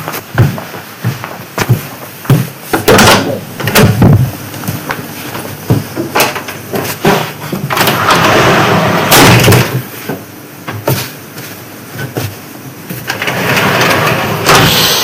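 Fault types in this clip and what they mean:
Hard clipping: the sound is pushed about 31 dB past what the chain can pass, so peaks get chopped flat and every loud moment turns into harsh fuzz.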